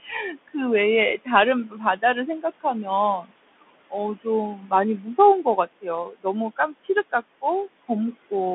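From the first moment to the end, the speech carries the Bluetooth CVSD headset codec. Nothing passes above about 3.8 kHz, and the line band sits roughly between 200 Hz and 3.5 kHz. Because each sample is coded as a single up-or-down bit with an adapting step, which fits a 64 kbps CVSD link, the damage is plainly audible: s sounds turn scratchy, loud bright syllables distort, and a granular hiss rides under the voice. On a spectrogram everything above 3.8 kHz is empty, with a speckled haze filling the band below.

Noise suppressor artifacts also run throughout. The room noise, which sits about 18 dB below the speech, is pulled down by about 21 dB in the gaps and comes back up whenever speech starts. On a spectrogram the background floor flickers frame by frame, dark between phrases and filled in under them.

The same suppressor also takes parts of the speech for noise. This happens at 0.03 to 0.55 s (dropping up to about 16 dB), 1.69 to 2.03 s (about 10 dB), 3.21 to 4.26 s (about 20 dB) and 5.03 to 7.43 s (about 22 dB). 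Within each stretch only short pieces are hit, adding up to a fifth of a second or less in the first three and about 0.4 s in the last. Word endings and soft consonants sound swallowed there. The waveform shows sudden dips in the envelope, and the spectrogram shows speech energy briefly dropping.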